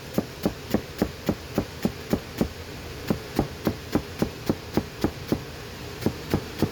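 Sounds with generation loss throughout. The texture is swirly, hollow and smeared, and attacks blur. The likely cause is MP3 encoding about three times over, consistent with 96 kbit/s.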